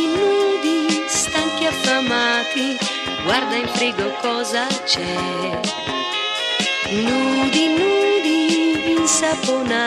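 No technical faults can be heard anywhere in this clip.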